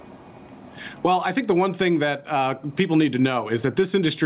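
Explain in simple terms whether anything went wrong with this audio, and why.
Something did go wrong: gain pumping runs through the whole clip. Loud and quiet parts sit unnaturally close in level, and the sound comes across as squashed. The likely cause is a microphone level set far too high, with a fast limiter repeatedly pulling it back down. The muffled, phone-like tone comes from the call line itself.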